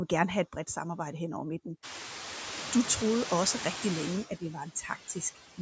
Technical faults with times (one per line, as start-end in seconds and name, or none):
0.00-5.61 noise suppressor artifacts
1.75-5.61 pre-emphasis left on
4.29-5.38 speech cut by the noise suppressor